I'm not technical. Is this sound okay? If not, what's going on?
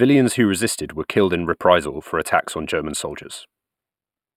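No. The speech has channel delay (comb filtering) from start to finish. One side of the stereo reaches you a tiny fraction of a millisecond after the other. When the two are mixed together, some high tones cancel out. The first gap sits at about 7 kHz. So the voice sounds hollow and dull at the top.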